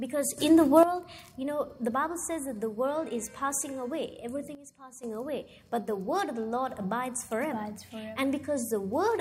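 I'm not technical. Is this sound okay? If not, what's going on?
No. There is a sudden gain jump, twice: the volume setting was likely switched instantly instead of eased in. From 0.38 to 0.83 s everything, background included, leaps much louder, and from 4.55 to 5.04 s it drops much quieter.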